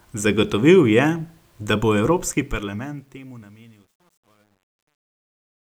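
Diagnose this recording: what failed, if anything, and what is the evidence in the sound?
A gain stage or sample-format conversion truncated the fade-out without dither, which fits roughly 10-bit resolution. From 2.28 s the fading speech turns grainy, and from 3.14 s to the end it is at its grittiest: truncation distortion on a fade.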